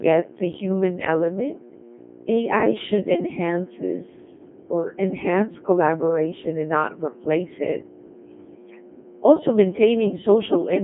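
A steady mains hum sits under the speech for the whole clip, a low tone at 60 Hz with some weaker harmonics above it. That points to a ground loop or a nearby transformer coupling the power line into the signal path. The hum is loud, only about 15 dB below the speech, so it stays audible through pauses and thickens the low end even while the talker is speaking.

The speech has also been through the Codec 2 vocoder from start to finish, and the damage is heavy. This codec sends only pitch, voicing, energy and a coarse spectral envelope, and the decoder rebuilds the voice from sine waves instead of keeping the original waveform. The result is robotic and buzzy, with an artificial tonal quality, which fits the 2.4 kbit/s mode. The band is also narrowed to the 200 Hz to 3.4 kHz range of a radio or phone line, with nothing at all above 3.5 kHz, so the sound is dull and boxy.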